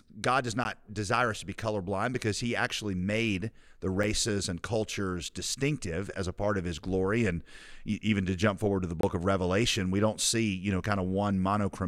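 Blocks of digital silence occur at 0.64 s, 4.04 s and 9.01 to 9.03 s, where the sound drops abruptly to silence for about 11.6, 5.8 and 23.2 ms, which fits blocks of 512, 256 and 1024 samples. The sound cuts out with no fade, so the first two sound like ticks and the last like a brief hole.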